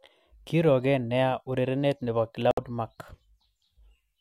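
At 2.51 s the speech cuts out in a digital broadcast dropout. The receiver stopped getting usable frames, either because the signal was lost or because frames failed their error check. It muted its output until clean frames arrived again. The gap runs to 2.58 s. About 64 ms of audio is missing, which fits two lost frames. It sounds like a single abrupt hole. The speech simply stops and resumes a moment later, and the part sent during the gap is gone.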